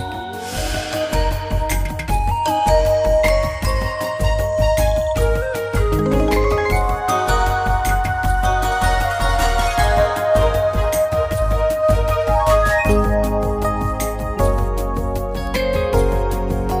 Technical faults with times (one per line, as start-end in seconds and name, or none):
7.46 bit error spike
10.43 bit error spike
15.47 bit error spike